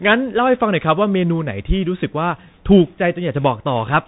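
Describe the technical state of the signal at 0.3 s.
Narrow and muffled, with scratchy s sounds and granular hiss, throughout the clip: Bluetooth CVSD headset codec, tracking the wave in one-bit adaptive steps, nothing above 3.8 kHz.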